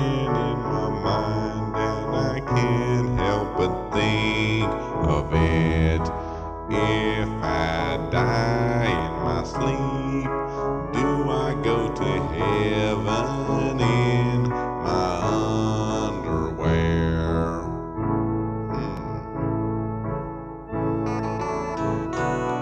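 At 8.99 s and again at 18.97 s the sound skips forward by a tiny amount, roughly 20 ms. This is audio missing between chunks, likely from recording in 10 s blocks. The waveform shows an abrupt jump, and the spectrogram shows a thin vertical seam.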